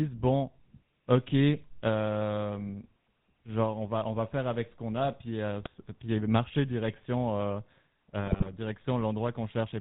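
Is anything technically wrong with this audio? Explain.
Yes. Throughout, the GSM full-rate codec coarsely models the vocal tract with sparse pulse excitation, which fits about 13 kbps, giving buzzy, gravelly speech; spectrograms show nothing above 4 kHz.

GSM bit errors hit at 5.62–5.68 s, between "qu'on a puis euh" and "puis marcher direction euh", and at 8.24–8.51 s. Corrupted filter, pitch and gain values cause squawks and gargling, visible as smeared spectra and level spikes.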